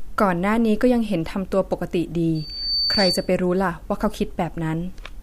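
At 2.35 s a microphone starts picking up the loudspeaker it is feeding, and around 4.6 kHz the loop's gain climbs past unity, producing loudspeaker feedback squeal. That single frequency reinforces itself on every pass, swelling over about 0.4 s into a piercing whistle that rises to about 5 dB above the speech. It holds as a steady, narrow tone until it stops at 3.33 s.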